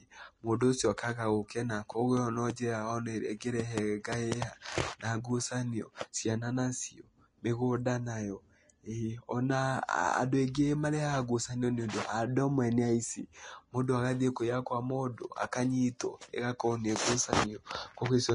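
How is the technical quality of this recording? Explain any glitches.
The recording carries one fault that runs the whole way through. Vorbis compression, throughout: the sound is likely a low-bitrate Vorbis encode, around 33 kbps, which strips everything above 10.6 kHz and quantises the remaining treble so coarsely that fine detail turns to grainy hiss, roughening the speech and softening consonant attacks.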